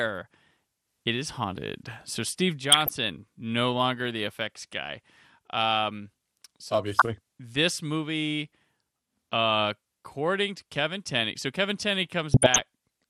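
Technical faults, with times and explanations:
Throughout: MP2 compression, likely at a low rate around 80 kbps. Too few bits leave upper sub-bands switched off or flickering and the remaining bands coarsely quantised, so the speech sounds dull with a gurgling, granular edge that is plainly audible across the clip.
2.72–2.94 s, 6.95–7.18 s and 12.31–12.62 s: DAB burbling, just before "no longer the effects" and "this movie" and again near the end. Bit errors slipping past error correction corrupt sub-band samples, giving short blips of noise in single bands over the speech.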